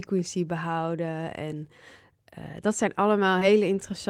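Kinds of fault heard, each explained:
Short concealed packet loss: a brief smeared wobble in the speech around 3.39 to 3.43 s, just after "eh dat zijn", where the sound briefly goes blurred and unnatural before settling. About 20 ms of audio failed to arrive in time, and the receiver covered roughly 16 ms of that gap by extending the preceding sound, its pitch if voiced or shaped noise if not, then crossfaded back into the real signal.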